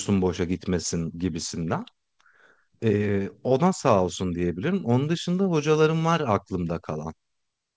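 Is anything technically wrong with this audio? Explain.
No, there is no fault to report: the speech has passed through a call path whose band stops at 8 kHz, which fits a G.722 codec at 64 kbps, and that upper limit is simply the expected bandwidth of that coding.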